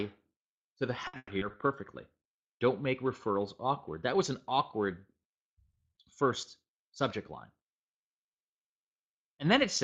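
Between 1.07 and 1.61 s, packets went missing or arrived too late over and over, and the receiver patched each hole by stretching out the last sound it had. This is repeated packet loss, which gives a robotic sound. About 240 ms of that half-second stretch, roughly 44 percent, is filled-in material rather than real audio. The longest single hole lasts about 120 ms. The passage sounds choppy, with fragments dropping out and repeats standing in for them.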